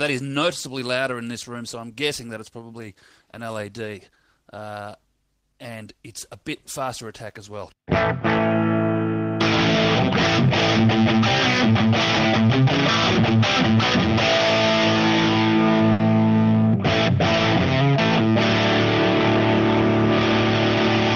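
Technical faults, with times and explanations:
15.92 to 16.01 s, short stall from a late packet: a packet arrived late and the jitter buffer ran dry, so the receiver stretched the preceding sound for about 70 ms before resuming where it left off. Nothing is lost, but that moment is held unnaturally long, with a slight buzz or dip, and everything after it plays 70 ms later.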